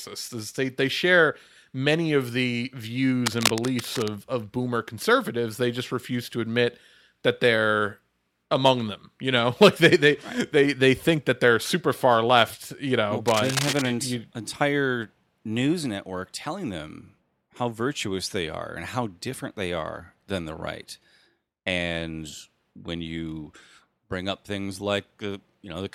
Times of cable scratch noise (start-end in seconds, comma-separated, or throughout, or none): 3.26-4.08, 13.26-13.82